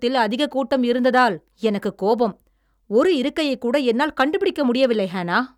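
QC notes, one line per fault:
0.73–1.23 s, hard clipping: crackly, gritty edge on the loud syllables just before "எனக்குக் கோபம்". Peaks driven about 2 dB past full scale are sliced flat, adding high harmonics.
4.20–4.22 s and 4.83–4.85 s, hard clipping: brief crackle right after "ஒரு இருக்கையைக்கூட என்னால்" and after "ஒரு இருக்கையைக்கூட என்னால் கண்டு". Peaks about 2 dB over the limit are squared off.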